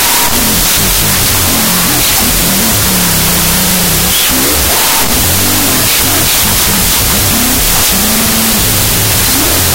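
From start to finish there's a wrong sample width fault, and the sound fits 32-bit float data being read as 16-bit integers. Mismatched bytes turn into loud hash, with the speech buried underneath at half speed, so it sits an octave low.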